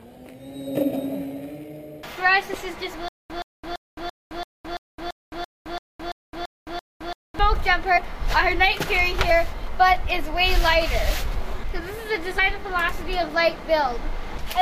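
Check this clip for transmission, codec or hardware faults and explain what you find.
There's one clear fault here, a stutter with silent gaps running from about 3.08 s to 7.39 s. A 122 ms fragment keeps coming back, twelve times in all, each followed by 215 ms of dead digital silence, so it pulses at a steady 337 ms rhythm. It's likely the playback or stream stalling: each retry replays the last chunk it had, then runs dry. Whatever should have played through that stretch is simply gone.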